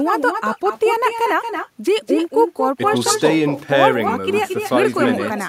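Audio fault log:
Throughout: echo with no canceller. Every phrase of speech is followed roughly a fifth of a second later by a copy about 6 dB quieter and thinner, returned from a far-end loudspeaker into an open microphone. Waveform and spectrogram show each syllable doubled by a fainter, offset ghost.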